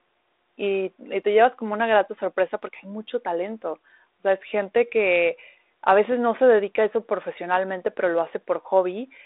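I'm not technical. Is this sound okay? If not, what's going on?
Yes, it's fine: this is speech over an ordinary phone-style line, so it sounds a bit narrower than talking in person, and nothing here is going wrong.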